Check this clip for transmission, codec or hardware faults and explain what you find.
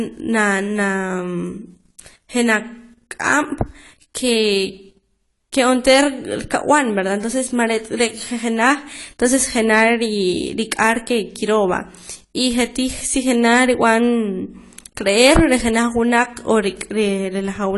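One codec fault runs through the whole speech clip. Nothing sounds above 11.5 kHz, and the audio is dull and smeared with a warbling fizz on sibilants. The likely cause is AAC compression at a low bitrate, where coarse quantisation strips and smears detail. A plain low-pass filter would dull the sound without that warble.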